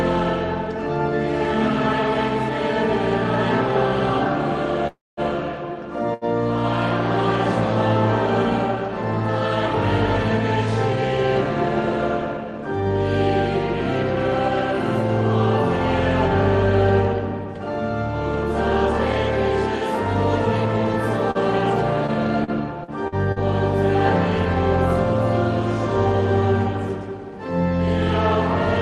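At 4.87 s a call audio freeze begins, likely because packets were held up in transit until the jitter buffer ran dry. The receiver carries the last sound forward as a fading sound that sinks into about 210 ms of silence, and the audio resumes at 5.20 s exactly where it left off. Nothing is lost, but a pause of roughly 300 ms has been inserted, and everything after it arrives that much later.

At 6.14 s a short stall from a late packet follows. One packet was not on hand when playback needed it, so the receiver stretched the final sound for about 77 ms until the packet turned up, then continued from the same point at 6.25 s. Nothing is skipped. A brief sound lingers slightly too long, and the added delay stays in place.

Between 11.26 and 12.66 s comes a jitter buffer speed-up. The buffer was holding more audio than its target, so the receiver repeatedly cut tiny slices, one or a few pitch periods long, to bring the latency back down. 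Playback runs about 4% fast while the pitch stays put, and some 70 ms are trimmed away in total. At that rate the hurry is subtle. A second, sharper speed-up at 17.33 to 17.53 s runs at 116% and removes around 40 ms in a fifth of a second, so it sounds clearly rushed.

From 21.31 to 23.39 s there is repeated packet loss, heard as robotic sound. Packets kept going missing or arriving too late, and each hole was patched by extending the preceding sound before the next hole arrived. The gaps are short, the longest about 43 ms, yet about 240 ms of audio is missing across the stretch, and about 10% of it is concealment. The result is choppy, with pieces missing.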